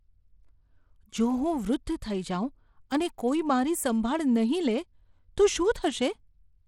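The speech here was likely squeezed through Bluetooth SBC compression at a starved bit pool, the kind of damage that fits a link running at about 96 kbps. With so few bits to share, the codec's sub-bands are coarsely quantised and the upper ones are left short, so the treble wavers rather than holding steady and a gritty, aliased haze rides on the speech for its whole length. The damage is plainly audible, and nothing sits above 18.8 kHz.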